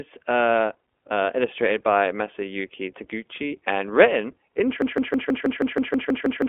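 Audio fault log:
throughout iLBC codec: Each 20 ms frame is coded independently at a low rate, which fits the 15.2 kbps iLBC mode, and the signal is held to a telephone band of about 250 Hz to 3.4 kHz with nothing above 3.6 kHz. The speech sounds muffled, plainly rough and slightly synthetic.
4.82–6.48 s broken-record loop: Right after "and written", the stream likely stalled and kept resending the last fragment it held. A 160 ms piece repeats exactly, back to back, ten times until the clip ends, and the speech that should follow is lost.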